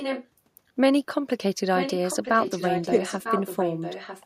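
From the start to 0.27 s, and again from 1.77 s to the end, a fainter copy of the speech trails the original by about 0.95 s, sitting around 10 dB below it. This is an echo leak, likely from a far end playing the call over a loudspeaker, where its echo canceller failed to remove everything the microphone picked up and the residue was sent back down the line.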